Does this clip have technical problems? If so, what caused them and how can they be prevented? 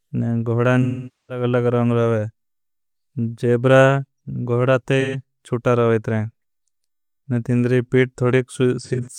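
Yes. AAC frame loss with concealment at 0.82–1.44 s, 5.00–5.18 s and 8.80–9.08 s: the decoder rebuilt the missing audio from the last good spectrum. On a spectrogram this shows as smeared, flat-topped bands, and the waveform dips during the 470 ms gap. Stronger error protection or retransmission on the link prevents it.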